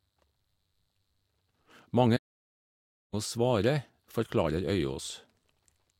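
At 2.16 s the speech just cuts out and stays silent until 3.14 s, a gap of about 964 ms, before carrying on. That's a playback stall: the audio halts mid-flow for a clearly noticeable stretch rather than a brief dropout. The likely cause is the player running dry of data or its thread getting blocked, with output going quiet until it caught up and resumed.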